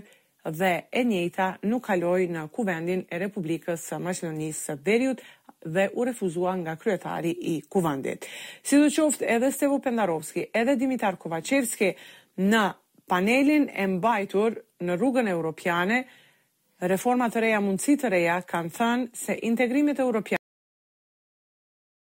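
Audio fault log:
20.36 s to 22.09 s, cut-off end: the sound stops mid-event at 20.36 s and falls straight into digital silence for the remaining 1.7 s or so, with no fade, release or reverb tail. The abruptness comes from the final stretch of audio never being written out or played. The last buffers were lost before reaching the output, so whatever was sounding is truncated at that instant instead of decaying naturally.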